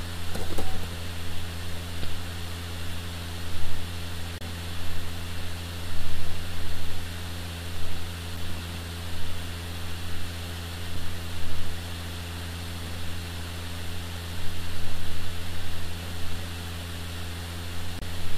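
Damaged data in a compressed stream throws the decoder off its frames at 2.03, 4.38 to 4.42, 8.37, 10.96 and 17.99 to 18.03 s. Each time it misreads or drops the corrupted frames and hunts for the next header, leaving a brief disruption in the sound.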